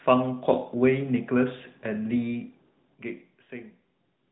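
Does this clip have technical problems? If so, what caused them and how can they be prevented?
No, the signal shows no technical faults that a listener could pick out.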